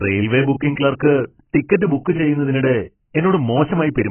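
From start to finish the speech sounds dull and smeared, with nothing at all above about 3.1 kHz and a warbly, fizzy edge on sustained sounds and sibilants. That's most likely heavy AAC compression, AAC-LC, squeezed hard enough that the encoder cut the top of the spectrum and quantised the rest coarsely, which fits a bitrate somewhere around 12 kbps. The coarse quantising is what gives it that smeared, warbly texture.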